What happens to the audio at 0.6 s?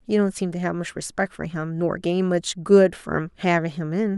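Nothing goes wrong at 0.6 s; the speech there plays through intact, with no dropout, click or other fault.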